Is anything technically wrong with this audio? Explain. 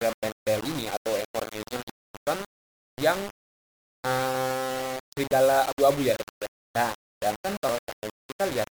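Yes. Two faults can be heard.

Throughout the clip there is grainy distortion that changes with the sound. The likely cause is low bit depth without dither. The graininess fits about 4-bit resolution. At that depth each sample is rounded to one of very few steps. The rounding error follows the signal instead of spreading as steady hiss. It sits only about 10 dB below the sound. Quiet passages turn gritty, and the quietest parts sputter or drop out.

At 5.24 s and 7.69 s the audio jumps ahead. These fit a dropped buffer (overrun). The hardware overwrote a block of samples before the program collected it. That block was lost, and the audio on either side was spliced directly together. There is no gap of silence. Instead the sound skips forward. The first skip loses roughly 30 ms. The second loses roughly 20 ms.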